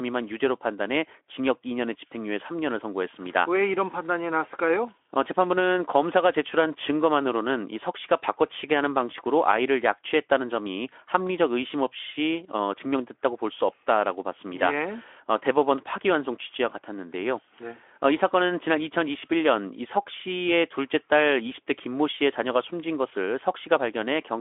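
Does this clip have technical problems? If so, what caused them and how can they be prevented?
No, there are no faults.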